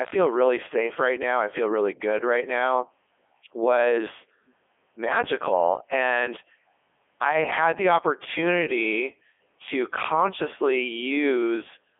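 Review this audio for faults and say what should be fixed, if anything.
Codec 2 vocoder damage throughout: the speech is resynthesised from pitch and envelope, sounding heavily buzzy and robotic, with nothing above 3.7 kHz, which fits the 3.2 kbit/s mode. To prevent it, record the source before the digital-radio link or use a waveform codec at a higher bitrate.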